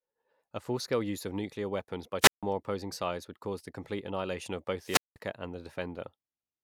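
Speech with two wireless microphone squelch dropouts, after "of nuclear weapons by" (2.21–2.43 s, 155 ms mute) and after "the complete annihilation of" (4.82–5.16 s, 189 ms mute). The fading radio link lets the receiver's squelch cut the output, so the waveform flatlines and the spectrogram shows blank gaps.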